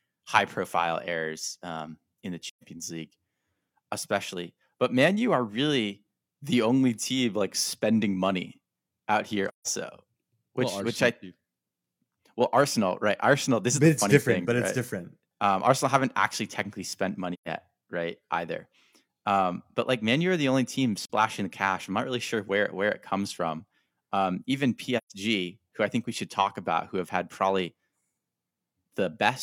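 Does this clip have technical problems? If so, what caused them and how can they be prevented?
Yes. The speech drops out in five soft-edged gaps from AAC frame loss with muting: at 2.49–2.64 s after "errors um in the", 9.48–9.67 s, 17.33–17.48 s after "haven't actually technically spent", 21.03–21.09 s between "are the only team" and "the cash I'm not", and 24.97–25.13 s. Gap lengths of roughly 43, 128 and 171 ms fit whole frames of about 43 ms. The decoder zeroed the missing spectra, so overlapping windows taper the sound out and back in. On a waveform each gap is a smooth fade to silence, and on a spectrogram it is a blank vertical band across all frequencies. Prevention: protect the stream with error correction or retransmission, or use a decoder that conceals lost frames instead of muting them.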